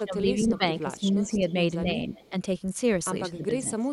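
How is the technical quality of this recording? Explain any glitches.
The recording has two recurring call-path faults: the talker's level is pulled down in stretches, and a faint delayed copy of the speech slips through in short scraps.

Speech suppressed in double talk occurs from 0.0 to 1.67 s, 1.83 to 2.12 s, 2.30 to 2.34 s and 3.37 to 3.91 s. The speech sinks in level by roughly 15 dB in the first stretch, by only a few dB in the second, and by about 20 dB in the last. It likely happens because both ends were talking at once and the echo canceller, unable to separate near speech from loudspeaker echo, turned everything down. This is a drop in the wanted speech itself. Nothing is added.

The echo leak appears at 1.25 to 1.53 s, 2.14 to 2.29 s and 3.34 to 3.45 s. In each, a faint duplicate of the speech trails the original by 264 ms and sits far beneath it. It is likely speakerphone pickup that the far end's echo canceller failed to remove, sent back down the line. 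Unlike the suppression, this adds sound: a quiet, delayed repeat rather than a loss of level.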